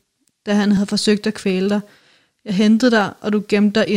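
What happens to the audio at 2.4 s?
Nothing goes wrong at 2.4 s; the speech continues intact through that moment, with no dropout, click or distortion.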